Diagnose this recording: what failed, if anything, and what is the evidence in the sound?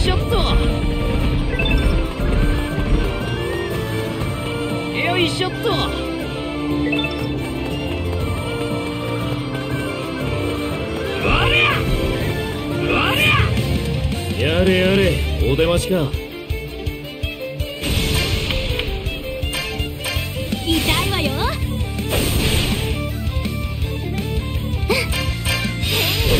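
Nothing failed; no stage shows any audible fault.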